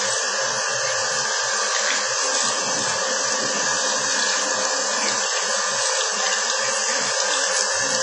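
Throughout, the audio sounds ringing and washy, with a hiss that swells and fades with the signal and no content above 10.4 kHz. The likely cause is heavy WMA compression, which fits a bitrate around 24 kbps: long transform blocks smear quantisation noise over tens of milliseconds and discard weak components.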